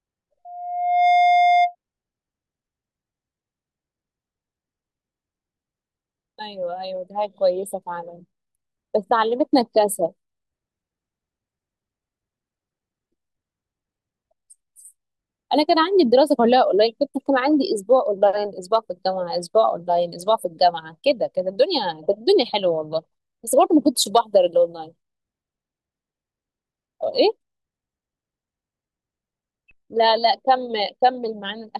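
A speech clip with loudspeaker feedback squeal from 0.45 to 1.75 s. A steady 707 Hz tone swells over under a second until it sits a few dB above the speech. A microphone is picking up its own loudspeaker, and the loop gain exceeds one at that frequency.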